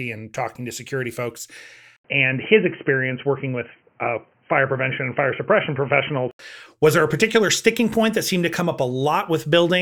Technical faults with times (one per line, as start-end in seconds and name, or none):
1.96-6.39 input switched to a poorer device